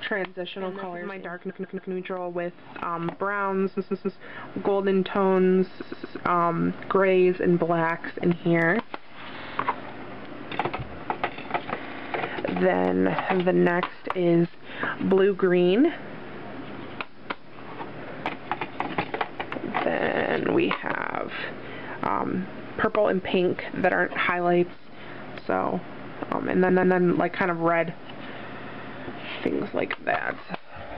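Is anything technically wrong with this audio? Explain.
Yes. There is a stutter at 1.49–1.91, 3.76–4.18, 5.81–6.16, 9.38–9.57, 11.84–12.12, 20.06–20.34, 26.68–26.96 and 28.54–28.89 s. At each one, a short slice of 46 to 139 ms plays two to four extra times. These are repeated frames: a run of compressed frames was stored or sent more than once, so the decoder plays it again. Each event stretches the audio by 186 to 418 ms.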